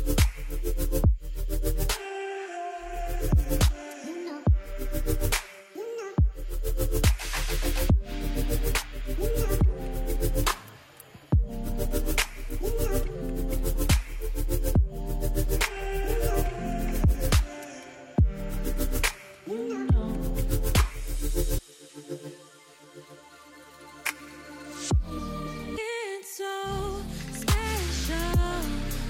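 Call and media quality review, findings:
Damaged data in compressed stream, 21.58 s: brief blip in the sound. Corrupted bytes broke decoder sync; decoder component discarded frames until the next valid header.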